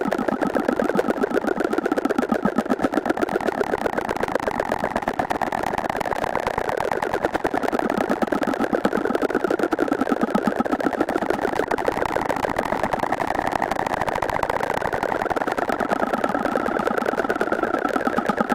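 No technical faults are audible.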